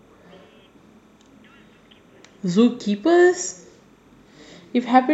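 Timecode bleed runs under the speech from start to finish: linear timecode leaking in from a neighbouring track or cable. It flips between roughly 1 and 2 kHz, a faint chirpy warble sitting very low, and its rhythm fits 30 frames per second.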